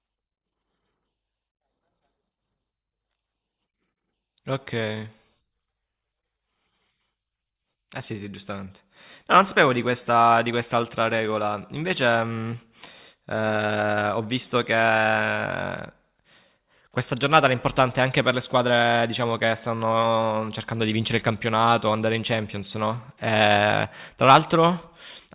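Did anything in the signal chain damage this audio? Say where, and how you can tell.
No, none of the stages between capture and playback has left any audible damage in this speech recording, and the signal holds steady and intact throughout.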